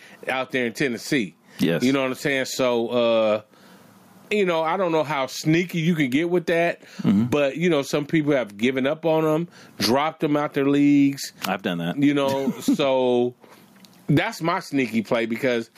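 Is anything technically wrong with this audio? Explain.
Yes. Gain pumping runs through the whole clip. The swing is around 25 dB. The likely cause is input gain set far too high for the microphone, with a fast limiter or compressor clamping down on every peak and releasing in the gaps. The result is squashed speech with little difference between loud and quiet passages.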